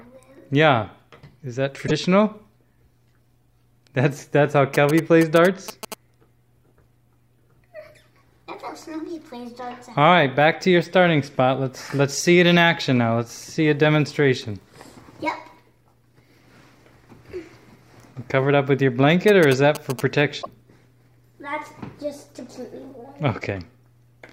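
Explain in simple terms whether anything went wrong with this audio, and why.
Two things went wrong. At 1.84 to 1.91 s and again at 20.39 to 20.47 s there's damaged data in a compressed stream: the file's bytes got mangled, so the decoder briefly lost its place and glitched. Between 4.74 and 5.94 s, and again from 19.28 to 20.01 s, you're hearing GSM signalling bursts. A nearby 2G phone was talking to its network, and the audio gear picked that up as a galloping dit-dit-dit of 217 Hz buzzing.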